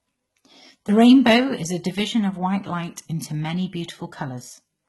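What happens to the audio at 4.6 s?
Low-bitrate HE-AAC compression, likely, runs through the whole clip including 4.6 s. The codec keeps only the lower spectrum and rebuilds the treble by copying lower bands upward, so the speech's s sounds turn gritty and metallic, with heavy damage that fits about 16 kbps and nothing above 11.8 kHz.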